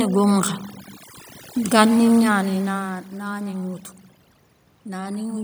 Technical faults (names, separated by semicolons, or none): overdone noise removal; automatic gain rising